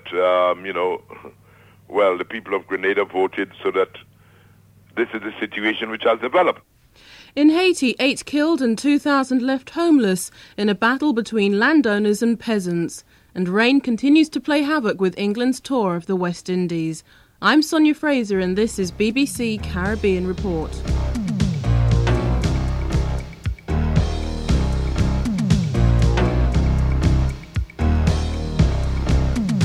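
No technical faults can be heard anywhere in this audio.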